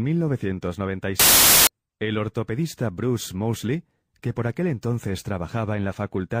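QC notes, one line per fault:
1.19 to 1.67 s, samples built from the wrong bytes: for about half a second the speech is replaced by loud, harsh broadband noise. The reader has assembled each sample from mismatched bytes. It may be shifted by one byte, have its byte order reversed, or assume the wrong alignment. The rapidly fluctuating low-order bits then land in the high-order position, so each value becomes essentially random and large.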